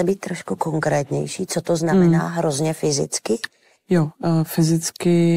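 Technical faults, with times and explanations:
0.56 to 1.17 s, drift correction step: right after "být trošku" the speech slows by 5.3% and drops about 94 cents, nearly a semitone, then snaps back before "co to znamená hmm", likely clock-matching software jumping its playback rate to rebalance a buffer.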